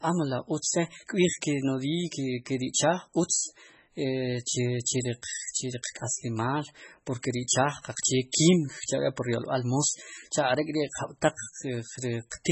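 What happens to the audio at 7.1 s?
At 7.1 s the speech carries the same damage heard across the whole clip, most likely from heavy MP3 compression at a rate fitting about 16 kbps: nothing above 8 kHz, and weak frequency lines dropping in and out between frames, giving a watery, swirling texture and smeared onsets.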